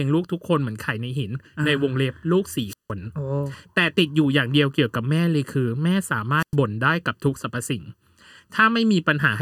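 Speech runs through the whole clip with channel delay (comb filtering): one channel trails the other by under a millisecond, and when the two are summed, cancellations start around 700 Hz and repeat at evenly spaced intervals. The result sounds hollow and phasey, and a spectrogram shows fixed horizontal notch bands throughout. Wireless microphone squelch dropouts occur at 2.67–2.91 s and 6.37–6.56 s. Each time, hiss rises as the radio signal fades, then the receiver mutes for 168 ms and 104 ms respectively. The waveform shows a near-flat gap preceded by brief noise.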